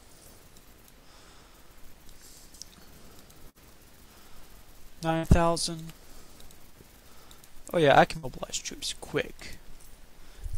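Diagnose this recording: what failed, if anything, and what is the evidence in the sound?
Network-stage failure: a burst of packet loss struck three times, at 3.49 to 3.58 s, 5.17 to 5.26 s and 8.17 to 8.26 s. Each time roughly 60 ms of audio never reached the player, and the receiver concealed the hole by extending the last sound it had for about 56 to 61 ms while fading it down. The sound briefly turns into a held, decaying tone or hiss, then picks up further along with that stretch skipped.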